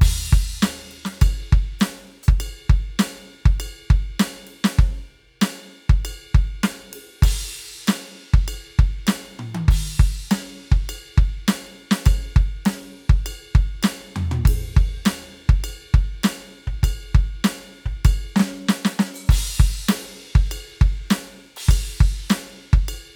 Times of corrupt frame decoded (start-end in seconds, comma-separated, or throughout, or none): none